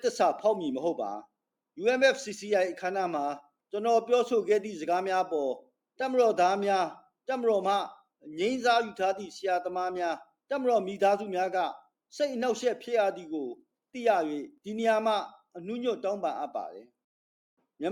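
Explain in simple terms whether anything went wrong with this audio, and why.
Nothing went wrong here: no dropouts, glitches or other technical faults turn up anywhere in this recording.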